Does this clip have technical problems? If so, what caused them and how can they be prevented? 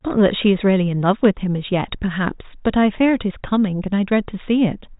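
No, this recording has no technical problems.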